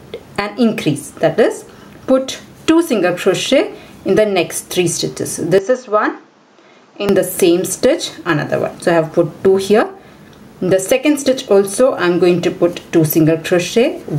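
Gain pumping runs through the whole clip. The gain swings around 10 dB, likely from an aggressive limiter. From 5.58 to 7.09 s the sound turns dull and drops roughly 10 dB, with nothing above 7.6 kHz and new noise far below. This points to an input switched to a poorer device, likely, with no gap at the switch.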